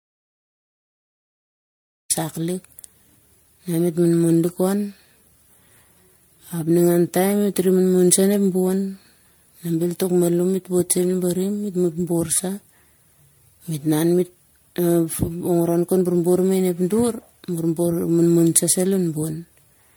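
From the start until 2.1 s the speech is an audio dropout to silence, with no room tone, unlike a quiet pause. The likely cause is lost input while recording continued. Throughout, the speech sounds swirly, hollow and smeared, with blurred attacks. This is generation loss, harsher than a single MP3 pass at around 96 kbit/s would produce, which points to roughly seven re-encodes, each adding its own noise and spectral holes.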